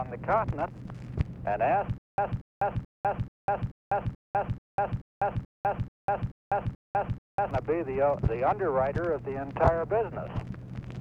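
From 1.98 to 7.51 s, stutter with silent gaps: a 233 ms burst recurs every 434 ms, likely a stalled stream replaying its last fragment.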